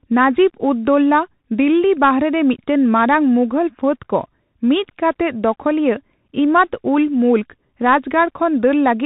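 Throughout, the speech is squeezed into a narrow band with nothing above 4 kHz, s sounds turn scratchy and a grainy hiss runs underneath. This is the Bluetooth CVSD headset codec: its one-bit up-or-down steps, fitting a 64 kbps link, cannot track loud high sounds.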